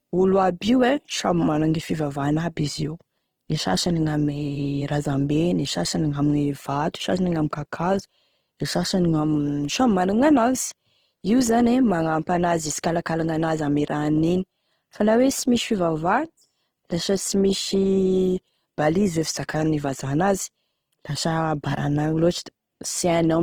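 Speech runs through all 23 seconds with plainly audible Opus compression damage: the voice turns rough, grainy and noisy rather than swirling. The likely cause is Opus in its music (CELT) mode at a rate that fits about 16 kbps, filling starved bands with folded or noise-like energy. A spectrogram would show few holes, just speckled, smeared band texture extending up to about 20.3 kHz, with nothing above.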